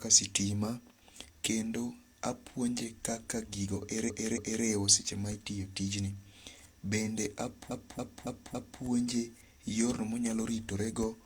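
A stutter at 4.04 to 4.60 s replays the same 0.28 s block twice more, and from 7.67 to 8.78 s that block repeats four extra times. These are repeated frames: a run of compressed frames was decoded again, lengthening the speech by 0.56 s and 1.11 s.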